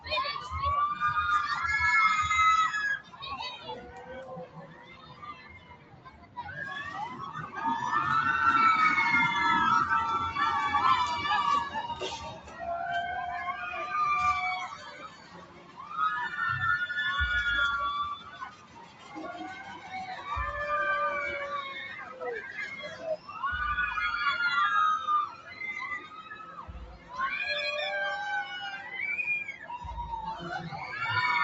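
Throughout the clip, a noise suppressor applied to music or sounds is at work. A speech-oriented suppressor treats sustained, steady material and its ambience as noise and pulls it down by as much as around 15 dB, while onsets pass largely intact. The result is a pumping, thinning quality. Unlike a plain compressor, the level drop tracks how steady the sound is, not how loud it is. The top end stops near 8 kHz, which is the call path's bandwidth and is heard separately from the pumping.

Sound cut by the noise suppressor comes in eight stretches: 2.99 to 7.57 s (about 15 dB at its deepest), 11.76 to 12.64 s (about 13 dB), 14.67 to 15.97 s (about 14 dB), 18.16 to 20.28 s (about 14 dB), 21.86 to 23.4 s (about 13 dB), 25.26 to 27.19 s (about 14 dB), then briefer dips at 28.76 to 28.93 s (about 6 dB) and 29.48 to 29.7 s (about 9 dB). Held sounds and decays sink rather than vanish, and attacks cut through. 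That is what separates this from a dropout, where everything falls silent at once.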